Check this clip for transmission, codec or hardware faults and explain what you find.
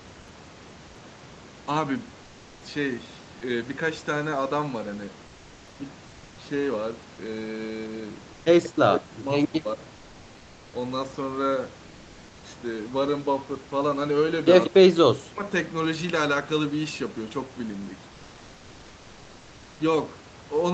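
One transmission fault is audible: comfort noise in place of the background, in a pause from 5.29 to 5.77 s.

For about 480 ms, the room noise, which sits about 26 dB below the loudest speech, gives way to a smooth, featureless hiss about 2 dB quieter, then the real background returns with the next sound. The likely cause is discontinuous transmission in the call codec: the sender stopped sending during the pause and the receiver filled the gap with synthetic noise shaped to match the background's rough spectrum. On a spectrogram, the textured, slightly uneven noise floor turns into a flat, uniform wash, bounded like the rest of the clip with nothing above 8 kHz, and then jumps back abruptly. The waveform shows a small step down in the noise envelope at 5.29 s and a step back up at 5.77 s.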